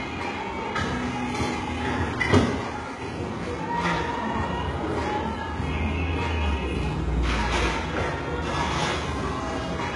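An everyday sound recording carrying heavy HE-AAC compression damage throughout: the treble is gritty and metallic, likely from band replication at a very low bitrate, around 12 kbps. A spectrogram shows upper bands mirroring lower patterns, with nothing above 11.4 kHz.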